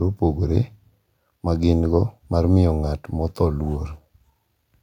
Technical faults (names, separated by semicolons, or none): none